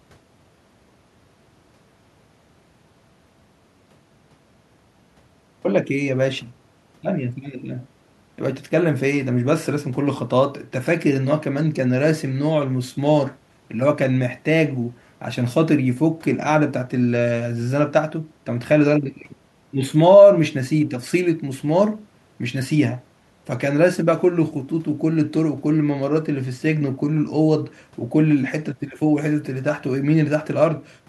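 Nothing technically wrong can be heard in this speech recording at any point.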